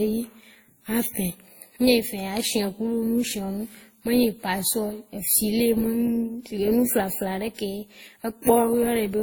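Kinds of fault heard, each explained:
Transcoding between lossy codecs: two overlapping sets of coding artefacts colour the speech throughout, with content reaching 20.1 kHz, likely from a low-rate Opus encode later re-encoded as WMA.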